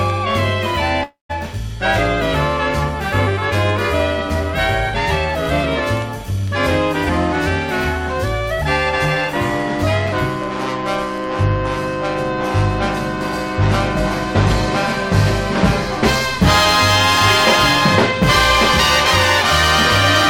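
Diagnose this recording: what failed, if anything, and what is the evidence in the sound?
From 1.03 to 1.31 s the sound decays into a fading buzz or hiss, then 0.14 s of silence, and resumes with audio missing: likely a long network dropout.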